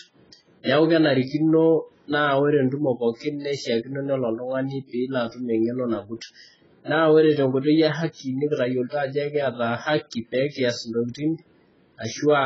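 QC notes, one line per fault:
throughout: AAC compression. The speech sounds dull and smeared, with nothing above 7.6 kHz and a fizzy, warbling texture on sibilants. The damage is heavy. The cause is likely AAC-LC at a very low bitrate, which fits about 12 kbps.
0.63–0.69 s: pre-echo. A short hiss runs about 56 ms ahead of a sharp onset, and the attack sounds soft and smeared. The codec spread its quantisation noise over the whole block. Noise sized for the loud attack also fills the quiet moment before it.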